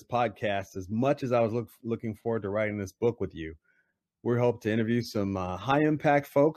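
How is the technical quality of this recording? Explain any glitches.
No glitches turn up anywhere in this speech recording. Nothing in the audio breaks, jumps or distorts at any point.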